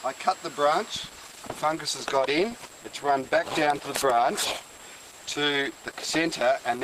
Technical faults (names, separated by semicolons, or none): adaptive stream at a lower bitrate